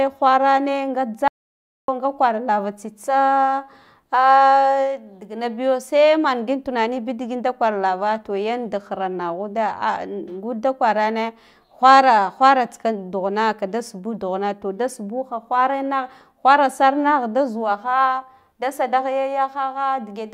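From 1.28 to 1.88 s an audio dropout to silence, likely a lost input, leaves total silence without the room tone a pause keeps.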